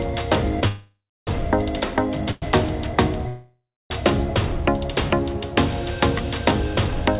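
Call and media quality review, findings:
Call audio freeze, 0.67–1.29 s: sound stalls, stretched as a fading buzz, then about 0.3 s of silence before resuming. Same at 3.28–3.92 s. Short stall at 2.31–2.44 s, fade only, no silence. Likely jitter buffer underrun from held-up packets. Playout is padded with concealment rather than dropped, so nothing is lost but the stream falls later each time. Audio band ends at 4 kHz, consistent with G.711 narrowband.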